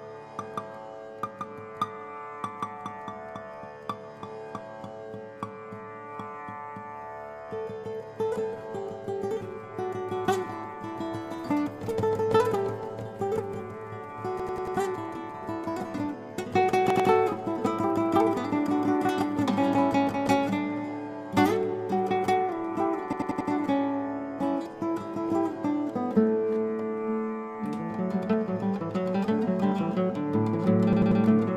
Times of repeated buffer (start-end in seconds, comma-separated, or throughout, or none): 14.40-14.77, 16.90-17.09, 23.13-23.50, 30.93-31.21